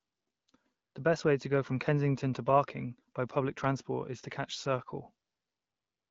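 Nothing stood out on listening to this speech recording, which comes through as ordinary AMR wideband (HD Voice) audio at 12.65 kbit/s.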